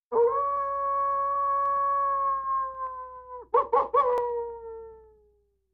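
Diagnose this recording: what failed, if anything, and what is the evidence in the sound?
Overlapping chunks at the buffer or block-processing stage. Short stutters occur at 1.66–1.68 s and 4.18–4.20 s, each replaying about 23 ms of the preceding sound. The two events are about 2.5 s apart, matching the chunk length. Each new block began before the previous one had finished, so the tail of one chunk and the head of the next both played, causing the doubled segment and click at each join.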